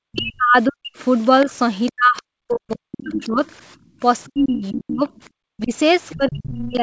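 Right from the start, 0 to 0.93 s, the speech dips and breaks up, falling by about 40 dB at worst. That's speech suppressed in double talk, likely because the echo canceller couldn't tell this talker from the loudspeaker echo and clamped down on both. A faint second voice, the other side's voice leaking through, pokes in around 0.13 to 0.33 s, roughly 20 dB under the speech. It happens again, and longer, from 1.46 to 3.43 s. The talker gets chopped and pulled down as much as about 40 dB while the leaked voice runs from 1.86 to 3.29 s, much more audible this time at about 10 dB below. Then, between 3.76 and 4.0 s, the room sound itself drops by about 23 dB for a brief moment before springing back. That's the background gated by the echo canceller, with the canceller squashing the mic hard while the loudspeaker played. From 4.01 s to the end, suppression returns, with dips around 30 dB. Scraps of the far side show up at 4.25 to 5.21 s, quiet at about 25 dB down, and at 6.09 to 6.45 s, at about 15 dB down. 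Everything sits under the 8 kHz ceiling you'd expect from a G.722 call path.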